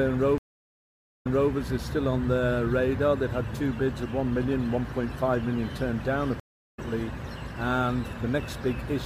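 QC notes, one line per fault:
0.38–1.51 s, stream reconnect: the waveform drops to a flat 0.87 s gap, then the sound restarts 0.26 s earlier than where it broke off, as a fresh decoder fades in.
6.40–6.80 s, stream reconnect: a flat 0.38 s gap on the waveform and an empty spectrogram band, then the sound resumes about a fifth of a second later, skipping material.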